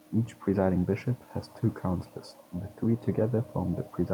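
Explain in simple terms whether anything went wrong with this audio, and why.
Nothing went wrong here.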